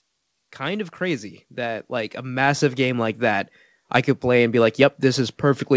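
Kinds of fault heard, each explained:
Automatic gain rising: the gain control judged the speech too quiet and turned its level up gradually, so the voice and the background noise swell together. The rise runs from 0.57 s to 3.27 s and adds about 10 dB. On a waveform, the envelope and the noise floor widen steadily over those 2.7 seconds. On a spectrogram, every band brightens at once, beneath the call path's empty region above 8 kHz.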